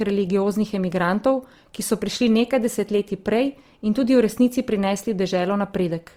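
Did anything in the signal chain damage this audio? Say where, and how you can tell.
Yes. The damage sits at the codec stage and runs through the whole clip: the speech sounds rough and grainy rather than swirly, with high bands filled by noise instead of real detail, which fits Opus compression, likely in its music mode at around 24 kbps with full bandwidth kept.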